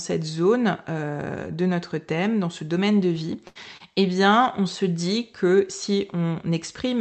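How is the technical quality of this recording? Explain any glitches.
The recording has a cluster of network glitches between about 2.6 and 3.8 s. The call path's Opus coding shows as a cutoff near 8 kHz and codec noise.

Lost packet rebuilt from error correction occurs at 2.57, 3.15, 3.55 and 3.80 s, each covering 20 ms. In each case a packet went missing, and the next one carried a low-bitrate backup copy that the decoder played in its place. Nothing drops out, so unlike concealment there is no smear or fade. Instead, a single 20 ms moment turns grainier and noisier before the audio continues.

A burst of packet loss runs from 3.47 to 3.57 s. About 80 ms of audio failed to arrive in time. The receiver extended the last sound for about 78 ms and let it fade, so a held buzz or dying hiss replaces what should be there. Speech then resumes past the hole. It differs from the short loss later because it is several packets long and audibly skips material. 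Its final 20 ms was recovered from error-correction data, so the tail sounds rough rather than silent.

Short concealed packet loss occurs from 3.77 to 3.82 s. Roughly 20 ms went missing and was covered by about 26 ms of synthesised continuation, based on the pitch of the preceding sound or on shaped noise, which was then crossfaded back into the real signal. The result is a brief smear or wobble rather than a held tone. Its last 20 ms also came from the backup copy.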